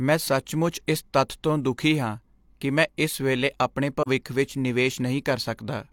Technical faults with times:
4.02-4.08 AAC frame loss with muting

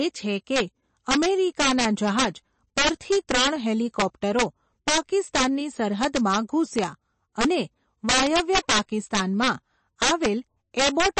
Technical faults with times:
0.00-11.19 integer overflow
0.00-11.19 MP3 compression

